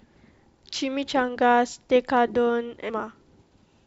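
At 2.88 s the speech jumps forward by about half a second, the sign of compressed frames skipped: the decoder never received or rejected a run of frames, which fits around twenty frames of 23.2 ms each. On a waveform the envelope changes abruptly with no gap. A spectrogram shows the harmonic pattern shifting discontinuously across a thin vertical seam.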